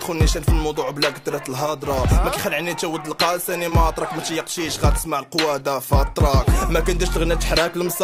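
At 3.69–3.72 s, short concealed packet loss: about 20 ms never arrived, and the receiver extrapolated the preceding sound, leaving a brief smeared, flattened patch on the spectrogram.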